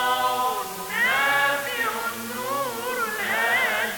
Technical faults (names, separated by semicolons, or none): low bit depth with dither